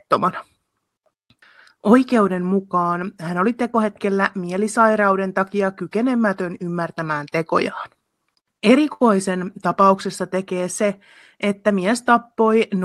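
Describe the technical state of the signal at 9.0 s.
A short stall from a late packet sits at this moment, from 8.93 to 9.01 s. A packet arrived late and the jitter buffer ran dry. The receiver stretched the last sound for about 71 ms while it waited. It then resumed from the same point, so nothing is lost. The delay grows by those 71 ms. The sound is held too long, with a slight buzz or dip, heard through the Opus call path's 12 kHz band limit.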